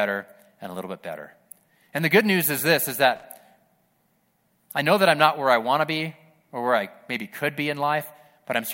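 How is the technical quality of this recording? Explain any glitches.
There is one glitch. At 3.16 to 3.24 s, just after "news is this is", there is loose connector crackle. A worn contact breaks the signal, heard as brief, irregular scratching.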